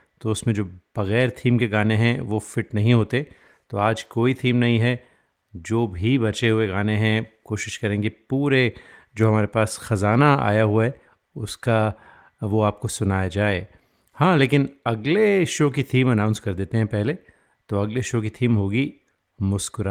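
No technical faults turn up in this speech recording, which carries Opus voice compression at 24 kbps in hybrid mode with full bandwidth, and the coding leaves only a light mark on the sound.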